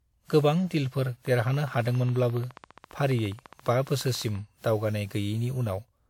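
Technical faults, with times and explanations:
Throughout, generation loss: the speech sounds swirly, smeared and hollow, with consonant attacks blurred more than a single encode would explain. This is likely from repeated decoding and re-encoding, on the order of ten passes, and the character points to a WMA-type codec at around 128 kbit/s. Each pass requantised on a shifted frame grid, so errors accumulated. On a spectrogram there is nothing above 17.8 kHz, with flickering holes and smeared transients in the upper bands.
1.27–4.36 s, train of clicks: just after "गोबां डीलफोर", a regular ticking of about 14.6 clicks per second runs over the speech and through its pauses, roughly fifty in all, with peaks about level with the signal. The pulses share one shape, which likely points to electrical interference or a faulty connection or power supply. The waveform shows evenly spaced sharp spikes, and the spectrogram shows thin vertical broadband lines at a steady interval.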